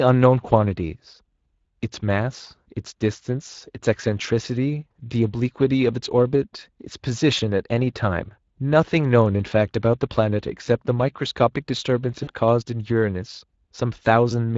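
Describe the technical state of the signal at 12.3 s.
At 12.3 s the signal sits inside a burst of VoIP packet loss concealed by the speech codec, running from 12.23 to 12.31 s. About 40 ms of audio never arrived, which fits two lost 20 ms frames, and the decoder filled the gap by repeating its last pitch and filter settings while lowering the gain each frame. The result is a brief buzzy tone or coloured noise that fades instead of breaking off cleanly, and the sound stays weak or distorted for a short while after packets resume, because each rebuilt frame carries on from the faulty one before it.

Underneath, the whole passage carries the Speex codec, here working at a setting that fits a bitrate near 20.6 kbps. Its CELP coder spends a limited budget on the excitation signal, so the codec damage is plainly audible: the speech has a grainy, hoarse edge, and any content above 8 kHz is replaced by a shaped noise fill.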